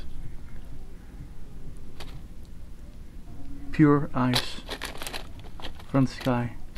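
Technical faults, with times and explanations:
Nothing in this audio points to a technical fault. There is no event here that needs a time or an explanation.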